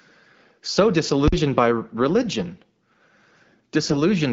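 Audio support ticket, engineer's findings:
1.28–1.32 s: invalid numbers at full scale. Loud pop at each edge, dead between. A DSP stage produced infinite or invalid values that clamp to the rail. The span fits a 2048-sample block, about 46 ms. Waveform shows a flat slab pinned at one extreme, well beyond the speech peaks. Spectrogram shows broadband vertical lines at the edges with an empty gap between.

3.82–3.94 s: AMR bit errors on the AMR-WB path, whose light coding texture suggests roughly 12.65 kbit/s. Sound turns hoarse and gargly while pitch and level roughly hold. This points to a handful of frames with several percent of their less protected bits flipped. The checksum still passed, so pulse positions, gains and spectral values decoded wrong. Waveform envelope looks intact. Spectrogram shows harmonics smeared into scratchy noise.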